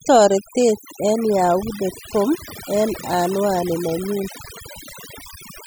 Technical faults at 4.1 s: overdone noise removal

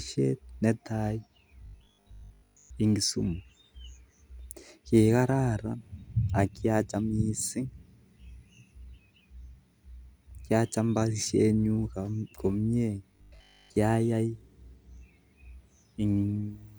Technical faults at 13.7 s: robotic sound from repeated short buffers

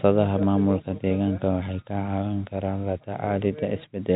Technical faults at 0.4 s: packet loss with last packet repeated

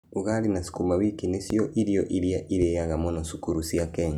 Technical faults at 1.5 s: loud pop

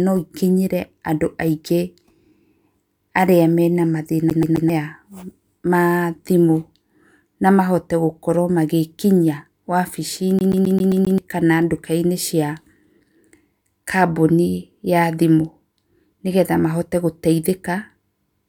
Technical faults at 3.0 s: none

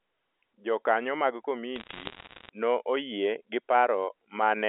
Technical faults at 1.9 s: bit errors on a digital phone line

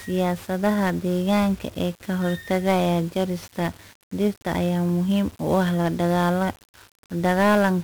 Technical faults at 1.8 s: 1-bit DFPWM compression

